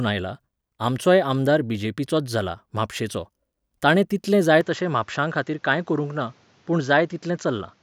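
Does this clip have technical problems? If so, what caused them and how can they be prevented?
Yes. From 4.61 s to the end, the speech turns duller. Nothing above 7.6 kHz remains. A faint new noise floor appears, with no gap and no level jump. The likely cause is the input switched to a poorer device. Lock the recording input so the system cannot change microphones mid-take.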